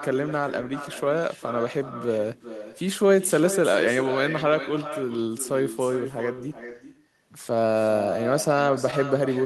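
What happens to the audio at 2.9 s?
At 2.9 s the speech is shadowed by echo with no canceller. The far end's loudspeaker feeds its microphone, so each phrase returns roughly 0.4 s later, about 11 dB quieter and thinner. On a spectrogram every syllable's harmonic pattern reappears as a fainter copy shifted right by that gap. On the waveform each burst of speech is followed by a lower-amplitude echo of its envelope.

The moment also falls inside the run of repeated timing corrections, from 0.14 s to 8.55 s. The receiver keeps inserting short repeated pieces so the stream plays at 98% speed, adding roughly 150 ms in total. Each edit is small and heard, if at all, as a slight hiccup or unsteady pace. On a spectrogram a repeated piece shows as a brief duplicated slice. On the waveform it appears as a tiny seam or discontinuity.

Those corrections come from clock drift between sender and receiver. 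The sender's clock runs about 2% slow, so the jitter buffer keeps draining and the receiver has to stretch the audio at irregular intervals. The sound is a slightly dragged tempo with small, unevenly spaced stumbles running through the clip. On a spectrogram they appear as small breaks in otherwise smooth harmonic tracks. On the waveform they show as minor joins at uneven spacing.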